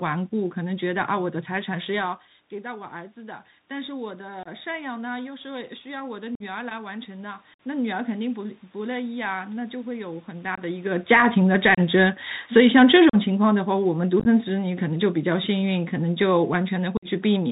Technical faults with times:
0.00-17.51 Bluetooth CVSD headset codec
2.61-11.51 automatic gain rising
4.43-4.48 unconcealed Bluetooth headset packet loss
6.35-6.42 unconcealed Bluetooth headset packet loss
7.54-7.60 unconcealed Bluetooth headset packet loss
10.55-10.61 unconcealed Bluetooth headset packet loss
10.98-16.51 automatic gain falling
11.74-11.79 unconcealed Bluetooth headset packet loss
13.10-13.15 unconcealed Bluetooth headset packet loss
14.20-14.28 unconcealed Bluetooth headset packet loss
16.97-17.06 unconcealed Bluetooth headset packet loss

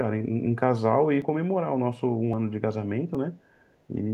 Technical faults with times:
1.22 dropped buffer (overrun)
2.33 dropped buffer (overrun)
3.15 dropped buffer (overrun)
3.68-3.74 echo leak

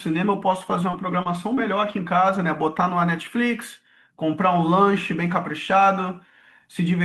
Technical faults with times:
0.91-0.96 short concealed packet loss
0.93-0.95 lost packet rebuilt from error correction
1.23-1.28 short concealed packet loss
1.25-1.27 lost packet rebuilt from error correction
1.55-1.60 short concealed packet loss
1.57-1.59 lost packet rebuilt from error correction

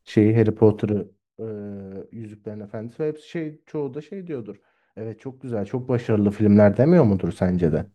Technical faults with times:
0.72-1.28 zipper noise
5.41-6.57 zipper noise

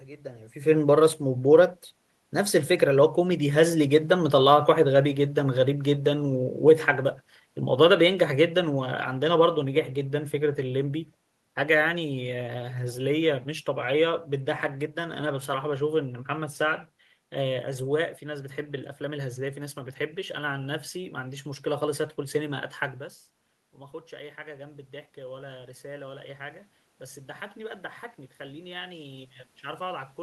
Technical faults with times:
2.67-4.01 automatic gain rising
4.09-6.54 automatic gain falling
24.09-30.22 automatic gain rising

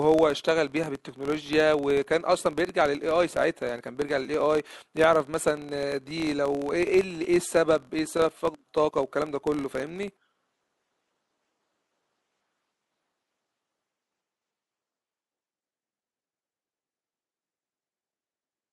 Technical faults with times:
0.00-18.72 filter restarted on every block

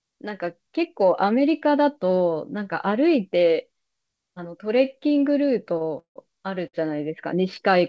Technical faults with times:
5.78-5.89 short stall from a late packet
5.99-6.18 call audio freeze
6.68-6.75 short stall from a late packet

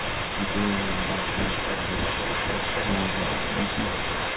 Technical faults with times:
0.00-4.36 echo leak

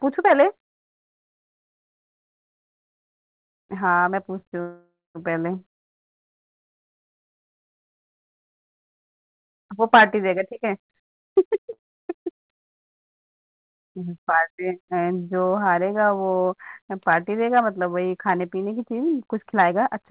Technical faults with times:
4.61-5.18 call audio freeze
10.29-11.66 jitter buffer speed-up
11.73-11.81 short stall from a late packet
19.53-20.04 jitter buffer speed-up

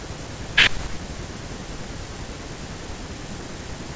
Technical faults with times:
none

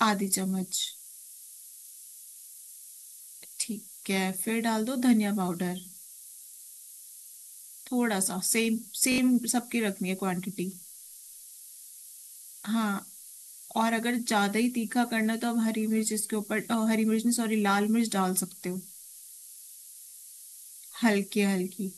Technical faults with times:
0.00-21.98 low bit depth with noise shaping
3.22-3.26 repeated buffer
9.12-9.18 repeated buffer
20.10-20.14 repeated buffer

